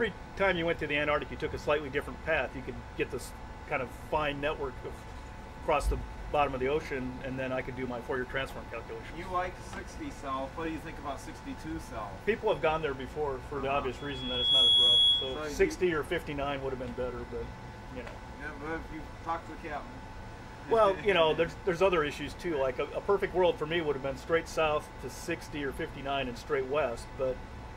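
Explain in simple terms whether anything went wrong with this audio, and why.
Something went wrong around 13.98 seconds: a microphone picked up the sound coming out of the loudspeaker it was feeding, so the audio kept looping round and getting louder at one pitch. That is loudspeaker feedback squeal. You hear a single high whistle at about 3.4 kHz that swells up over roughly half a second, ends up clearly louder than the rest of the audio, and lasts until 15.53 seconds.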